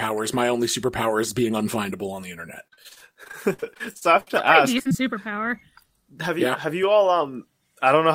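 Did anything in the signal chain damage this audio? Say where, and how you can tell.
Yes. Repeated packet loss (robotic sound) comes from the network, from 2.67 to 4.31 s right after "unfindable on the internet". Twenty gaps, up to 62 ms each, were patched by repeating sound. Spectrograms show smeared, repeated harmonic blocks.

Short concealed packet loss, also from the network, hits at 4.79 s, at 4.83 to 4.87 s and at 4.89 to 4.93 s. Each gap was bridged with extrapolated sound, heard as a brief smear or wobble. On the waveform these appear as small discontinuities.

A jitter buffer speed-up runs from 6.28 to 7.21 s, playing about 5% fast with roughly 50 ms of pitch periods cut. The waveform shows whole cycles removed at intervals, while pitch stays the same.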